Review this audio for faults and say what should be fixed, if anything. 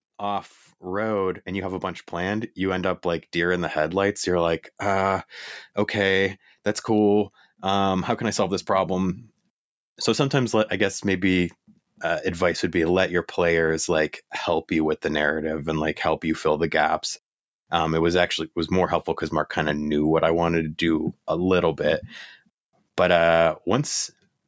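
Automatic gain rising from 0.18 to 4.2 s: the call's gain control judged the incoming speech too quiet and stepped its gain up over those four seconds, lifting the level by about 7 dB. Voice and room noise swell together rather than the talker getting louder, and the band-limited call sound, with nothing above 8 kHz, grows steadily louder. To prevent it, set the microphone input level correctly before speaking so the gain control starts near its target.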